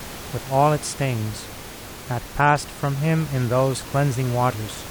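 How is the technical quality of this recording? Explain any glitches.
No glitches; the recording has no technical faults.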